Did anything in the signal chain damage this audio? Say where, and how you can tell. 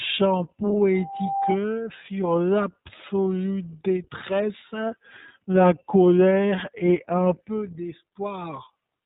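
Yes. The codec stage left an iLBC codec signature across the whole speech clip. Nothing passes above 4 kHz, and a rough, synthetic quality sits on the speech, which points to 20 ms frames at about 15.2 kbps. A simple low-pass filter would dull the sound without that coarse, frame-by-frame roughness.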